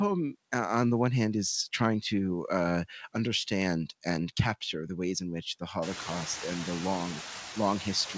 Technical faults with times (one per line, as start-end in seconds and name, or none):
0.00-8.17 noise suppressor artifacts